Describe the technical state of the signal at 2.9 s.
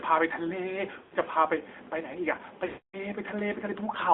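At 2.9 s the signal is inside a run of lost AMR speech frames lasting from 2.66 to 2.97 s. Radio errors corrupted the frames, so the decoder replayed its last good pitch and vocal-tract settings at falling gain. The speech smears, then dies away to silence.

Underneath sits the AMR narrowband mobile codec. Its 8 kHz sampling and band filtering confine the audio to about 250 Hz to 3.6 kHz, and its vocal-tract model, fed sparse pulses, adds a plainly audible buzzy, synthetic coarseness that fits a mid-rate mode of around 10 kbps.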